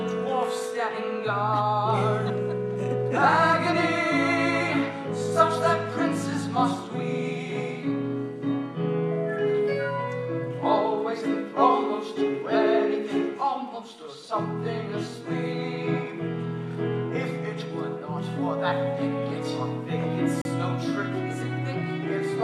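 At 20.42 to 20.45 s the sound drops to silence for about 36 ms, then resumes. This is likely a Bluetooth stall, where delayed packets left the headphone buffer empty.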